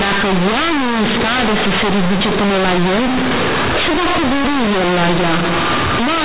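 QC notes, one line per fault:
Throughout, companded audio read as linear. The speech was stored as A-law telephone bytes, but they are played as plain linear 8-bit samples with no expansion. Each change of sign throws the output across about half its range. Quiet sounds come out as large as loud ones, and the waveform is bent out of shape. This gives buzzy distortion on the speech and strong noise in the pauses. The G.711 band limit itself holds, with nothing above 4 kHz.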